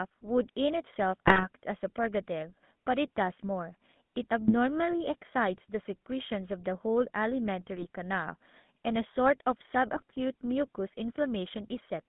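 The whole speech clip carries the sound of the GSM full-rate codec. The band runs from about 150 Hz to 3.6 kHz, so nothing bright survives. The codec rebuilds the voice from a vocal-tract filter fed by sparse, evenly spaced pulses. Much of the fine excitation detail is thrown away. The result is a plainly audible buzzy, gravelly roughness. The coarseness fits a low-rate stream of around 13 kbps.

GSM bit errors then strike four times: 1.27 to 1.46 s, 4.42 to 4.54 s, 7.76 to 7.86 s, and 9.96 to 10.03 s. Corrupted bits reach the decoder. Damaged filter, pitch or gain values warp the spectrum or spike the level for a few frames. Each burst sounds like a short squawk, pop or gargle. The last burst is the briefest, yet it points to the densest errors.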